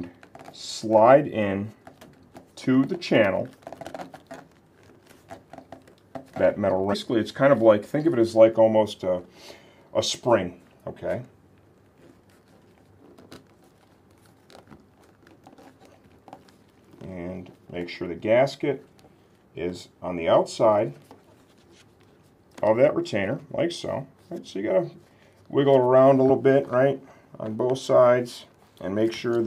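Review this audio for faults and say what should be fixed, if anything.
Two short bursts of damaged data in a compressed stream, at 6.92 to 6.94 s and at 26.29 s. At each, corrupted bytes make the decoder misread frames and lose sync until it finds a valid header, producing a brief glitch. A spectrogram shows a thin vertical break cutting across the sound. The waveform shows a tiny discontinuity or odd spiky fragment. To prevent it, fix the transfer or storage path and verify files with checksums before decoding, re-fetching any that fail.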